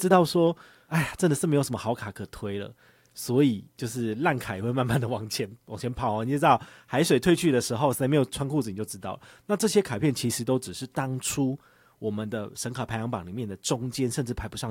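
There are no technical faults to describe at any point in the recording.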